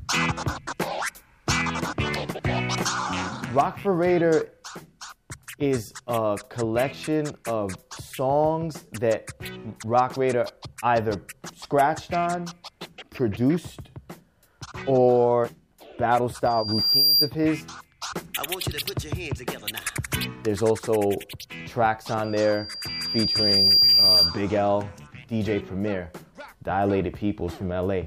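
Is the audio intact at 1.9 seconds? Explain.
Yes, the audio is intact at 1.9 seconds, with no dropout, click, distortion or other fault audible at that moment.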